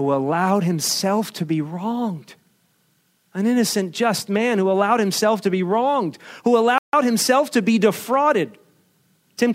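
At 6.78 s, just after "to be wronged who", the speech cuts to total silence for about 0.15 s and resumes at "himself to be", most likely a Bluetooth stall: the headphone buffer ran dry awaiting resent packets. Unlike a codec dropout, the gap is clean, with no smeared filler sound.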